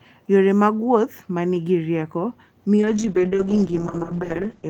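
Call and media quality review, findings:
Speech turns rough and muffled from 2.79 s to end; top end falls from 20 kHz to 8 kHz, worst for 1.43 s. Call bitrate drop: bandwidth estimate fell, encoder starved, consistent with 32 kbps dropping to 8 kbps.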